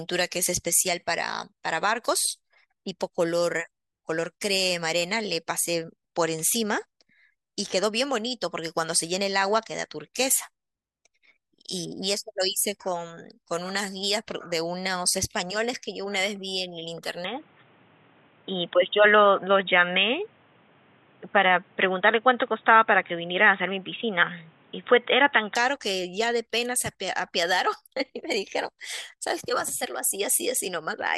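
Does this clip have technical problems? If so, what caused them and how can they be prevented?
Yes. From 17.24 to 25.55 s the speech turns dull and boxy, with nothing above 3.8 kHz, a modest jump in level and a faint new background noise well below the speech, then clears again with no gap at either change. The likely cause is the input switched to a poorer device partway through, such as a second microphone or a headset's call profile, whose narrower band, tone and noise floor replace the original for that stretch. To prevent it, lock the recording input to one microphone and turn off automatic device switching before recording.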